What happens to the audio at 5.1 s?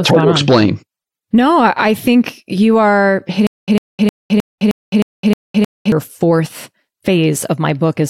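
At 5.1 s the playback is likely stalling and retrying, which produces a stutter with silent gaps from 3.47 to 5.92 s, just after "I think you are". A 100 ms fragment replays eight times, each followed by about 211 ms of digital silence, repeating every 311 ms. The audio that belonged in that stretch is lost.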